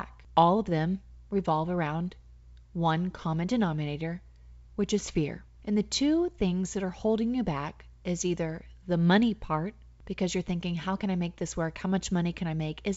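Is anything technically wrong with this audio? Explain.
No, no technical faults heard.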